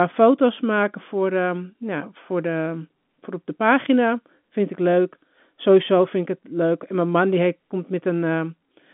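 Nothing is actually wrong here: it's just speech carried over an ordinary G.711 A-law phone line at 64 kbps, so the sound sits in the usual telephone band of roughly 150 Hz to 3.5 kHz with nothing above about 3.8 kHz, which is simply how that kind of line sounds.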